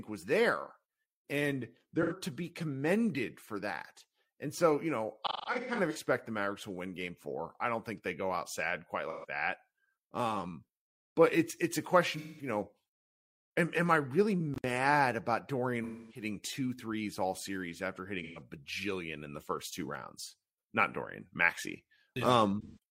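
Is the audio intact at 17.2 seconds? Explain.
Yes, at 17.2 seconds the speech plays through cleanly, with no dropout, click, distortion or other fault to be heard at that moment.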